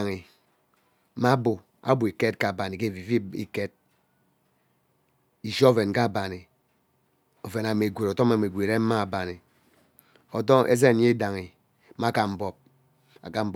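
Nothing stood out on listening to the speech recording.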